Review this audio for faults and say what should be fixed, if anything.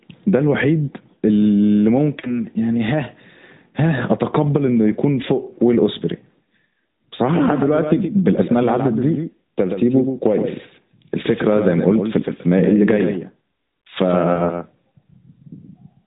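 Lost AMR speech frames occur at 2.20 to 2.40 s and again at 14.34 to 14.41 s. The first gap covers about 40 ms of missing audio, which fits two consecutive 20 ms frames. The second is a single 20 ms frame. In each case the decoder filled the gap by repeating the last good pitch and vocal tract settings at falling gain, so the speech smears and dips briefly before clean frames resume. The narrowband sound, with nothing above 4 kHz, is the codec working as designed. To prevent the dropouts, strengthen the radio link or add error protection and redundancy so that fewer frames fail their checksum.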